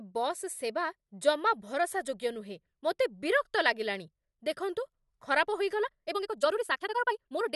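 From 5.80 s to the end at 7.56 s there's a time-stretched section: the speech suddenly runs about 1.72 times faster with pitch unchanged, sounding rushed, likely because software squeezed it to fit by dropping short slices rather than resampling.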